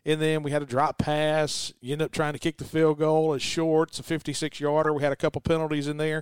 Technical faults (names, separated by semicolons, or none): corrupt frame decoded